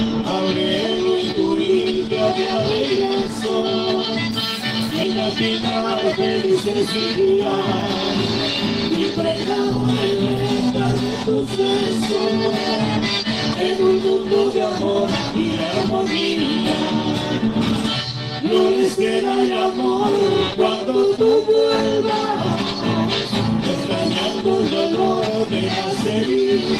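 At 5.03 s there's a skip ahead: roughly 0.7 s of audio was dropped while later audio was already queued, and playback jumped straight to later material, with no gap filled in, so the sound lurches forward with a chunk simply gone.

Then there are three stretches of jitter buffer speed-up, from 6.16 to 7.33 s at 108%, from 10.62 to 12.13 s at 103%, and from 13.23 to 15.32 s at 105%. The buffer was holding more than it wanted, so it trimmed tiny pitch-period slices, about a tenth of a second in the first and last stretches and half that in the middle. The pitch doesn't change, but the first and last passages feel slightly rushed.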